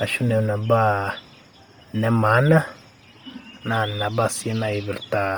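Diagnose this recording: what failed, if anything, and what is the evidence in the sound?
Codec stage. Throughout, the speech has a breathy, grainy upper edge. This is likely Bluetooth LC3 compression near 32 kbps, filling the zeroed treble with noise.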